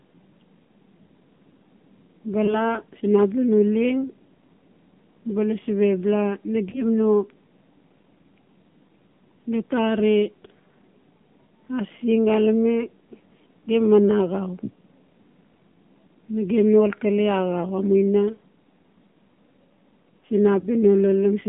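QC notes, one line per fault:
throughout: AMR narrowband mobile codec. The sound sits in a narrow phone band of about 150 Hz to 3.5 kHz. There is no low body and no air above it. The speech comes through a vocal-tract model driven by sparse pulses, not as a waveform copy. At this low rate the damage is plainly audible as a buzzy, synthetic edge, which fits a 7.4 kbps AMR-NB mode.
2.46–2.58 s, 6.70–6.83 s, 20.60–20.69 s: lost AMR speech frames. At each point the speech briefly dips and warbles, then carries on. One 20 ms frame went missing each time, most likely through a radio error that failed the frame check. The decoder filled the gap by repeating the last good pitch and vocal-tract settings at lower gain. Its recovery over the next frames stretches each blemish beyond the 20 ms that was lost.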